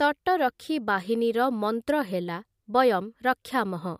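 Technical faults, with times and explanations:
Throughout: low-bitrate audio saved at a high bitrate. Nothing sits above 15.3 kHz, a flat ceiling on the spectrogram, with the smeared, watery detail of heavy compression, likely from an earlier MP3 encode near 65 kbit/s that the later higher-rate copy cannot undo.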